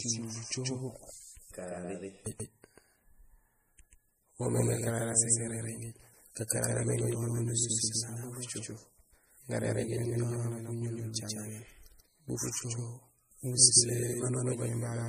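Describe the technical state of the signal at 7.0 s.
At 7.0 s, as across the whole clip, the speech carries a doubled audio track: a second full-band copy trails the original by roughly 150 ms at about the same level. It is likely the same signal captured twice through a slower path. Unlike an echo or reverb, the copy has no decay and no room colour.

The same moment also shows low-bitrate audio saved at a high bitrate. Nothing sounds above 15.2 kHz, and the artefacts of a 40 kbit/s MP3 encoding remain. The likely cause is a re-encode to a 303 kbit/s MP3, which cannot restore the lost detail. A clean low-pass filter would give the same cut-off without that coding damage.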